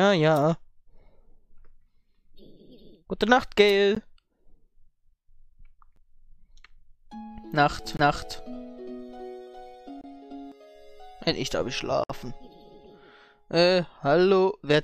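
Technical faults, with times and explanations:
3.95, 5.96, 7.97–7.99, 10.01–10.04 and 12.04–12.10 s, gap between stream segments: timestamps on the 2-second segments leave small holes that the player fills with silence, so the sound cuts out with hard edges for roughly 10 to 60 ms at each boundary, every two seconds.
7.85–10.52 s, doubled audio track: the same audio is mixed in a second time, likely through a slower capture path, trailing by about 0.4 s at about equal level, full-band and dry, and it starts and stops abruptly.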